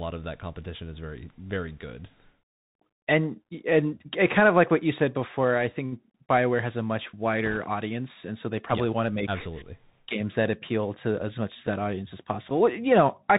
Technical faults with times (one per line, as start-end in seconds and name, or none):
0.00-13.38 Bluetooth CVSD headset codec
7.45-7.57 bit errors on a Bluetooth voice link